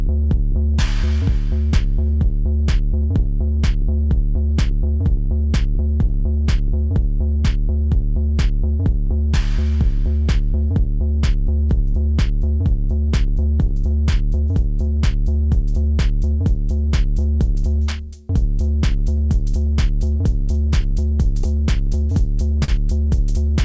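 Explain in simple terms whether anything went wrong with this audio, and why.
From about 0.06 s to 22.0 s the sound runs slightly slow and unsteady, at roughly 97% speed, as if gently stretched. Across the clip this adds up to around 0.7 seconds of extra time. These are repeated timing corrections: the receiver keeps inserting tiny repeated pieces to keep up.

The reason is clock drift between sender and receiver. The sending device's clock ran a few percent slower than the receiving one's, so the receiver's waiting buffer kept running low and had to be topped up with repeats.

Between 8.83 s and 15.38 s there are about four ticks or smears, each very brief. Between 19.16 s and 22.71 s there are about three more, the longest around 40 ms. These are scattered short gaps: small bits of data arrived late or went missing, and the receiver filled each hole by stretching the last sound. Everything passed through a call connection that leaves nothing above 8 kHz, so the highest frequencies are missing.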